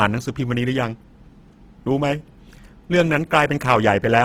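Throughout the speech, Opus compression is plainly audible: the encoder keeps each band's energy but, starved of bits, fills bands with folded or noise content, so tones turn grainy and rough. This likely comes from CELT-mode Opus at about 16 kbps.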